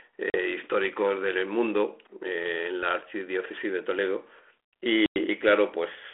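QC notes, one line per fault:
0.30 to 0.38 s, packet loss on an ADPCM call: a hard-edged gap of about 40 ms, which fits roughly two lost packets, filled with silence. On resumption the decoder's adaptive predictor and step size no longer match the sender's, so the speech comes back with brief distortion before settling.
5.06 to 5.19 s, packet loss on an ADPCM call: a longer silent hole of about 100 ms, around five packets' worth, again abruptly cut. The resynchronising decoder gives the returning speech a short burst of distortion lasting some tens of milliseconds, heard over the 300 Hz to 3.4 kHz telephone band of the 32 kbit/s G.726 line.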